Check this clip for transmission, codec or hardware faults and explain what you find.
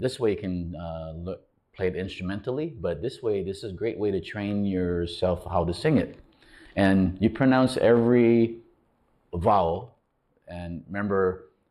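There's one fault, channel delay (comb filtering), running the whole way through. One channel lags the other by a few samples, about 0.07 ms, and summing them to mono cancels evenly spaced frequencies. The first notch sits around 7 kHz, so the top end sounds dull and hollow.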